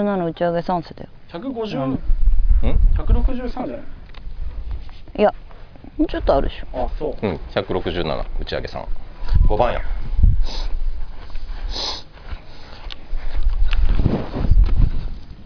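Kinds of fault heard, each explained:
No audible faults: no dropouts, level jumps, distortion or timing errors anywhere in the clip.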